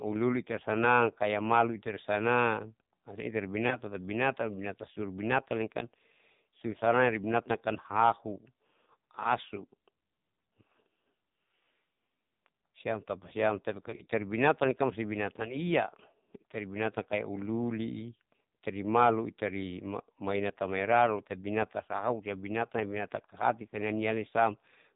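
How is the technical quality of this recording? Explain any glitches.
The technical quality is poor. The speech has passed through the AMR narrowband mobile codec with heavy damage, and two short bursts of lost AMR speech frames interrupt it.

The codec damage runs throughout. Nothing above 4 kHz survives. The voice sounds buzzy and synthetic, which points to one of AMR-NB's lowest modes, around 6 kbps. The codec rebuilds speech from a vocal-tract model excited by a few pulses, and at so few bits the excitation turns coarse. A simple low-pass filter would only dull the sound, but this adds the codec's metallic, reconstructed texture.

The first loss comes at 3.68 to 3.79 s and sounds like a single missing frame. The decoder reuses the last good pitch and vocal-tract settings at lower gain, so this is a brief warble and dip rather than a hole. A plain dropout would cut to silence with a click, whereas concealment stretches the previous sound.

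The second is a rougher patch from 13.90 to 14.07 s. Losses are scattered across about 160 ms, and the longest run lasts 40 ms. The sound smears and sags repeatedly, then returns weak and rough as the decoder recovers. Because it is broken up rather than one gap, it sounds like stuttering concealment, not a single cut.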